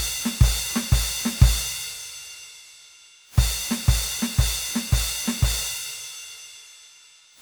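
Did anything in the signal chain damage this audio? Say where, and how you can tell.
Yes. The damage sits at the codec stage and runs through the whole music clip. It has the swirly, smeared, hollow quality of generation loss. Attacks are blurred. The texture sounds worse than a single pass at around 96 kbit/s would leave it. This points to a lossy codec such as WMA being decoded and re-encoded many times, likely about seven. Each pass quantises on a shifted frame grid, so noise and spectral holes pile up.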